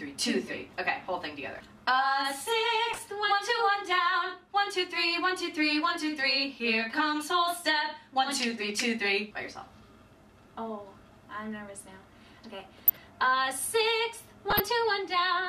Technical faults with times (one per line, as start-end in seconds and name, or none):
2.92-3.07 DAB burbling
12.60-12.97 DAB burbling
14.50-14.60 DAB burbling